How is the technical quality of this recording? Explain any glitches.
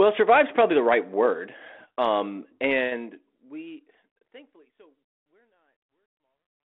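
The recording shows no technical faults or glitches; the speech fades out smoothly from about 2.5 s to the end as an intended edit, with no dropouts, clicks, distortion or level problems to be heard.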